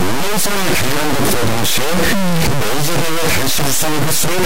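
A speech recording with harsh, buzzy distortion running through the whole clip. This is the sound of a stuck bit. A single data bit is likely held at a fixed value by a broken line or converter. About half the samples are pushed off by that bit's weight, about -10 dBFS here, which is a high bit. So the error is large. The speech turns harsh, and even the pauses fill with loud noise, because small values near zero keep flipping the bit's effect.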